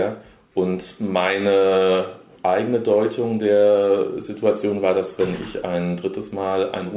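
No faults to report: the audio comes through a WebRTC call path whose G.711 mu-law coding at 64 kbps leaves nothing above 4 kHz, as expected for that link.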